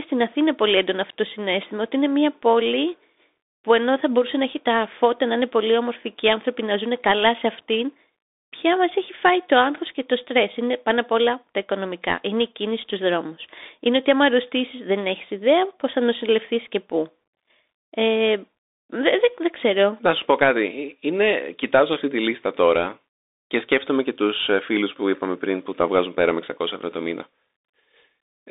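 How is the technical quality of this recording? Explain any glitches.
The quality is poor throughout, because the speech passes through a Bluetooth CVSD headset codec for all of it. CVSD codes each sample as a single up-or-down bit, and its step size adapts to the signal. The passband runs only from about 250 Hz to 3.7 kHz, so the speech sounds thin and boxy. The codec damage is plainly audible. Sharp, loud sounds outrun the step size and distort. S sounds turn scratchy, and a granular hiss sits under everything. This fits a 64 kbps CVSD stream.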